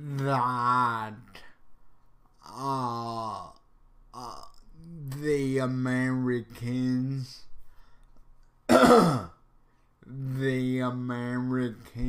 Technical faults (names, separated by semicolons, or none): none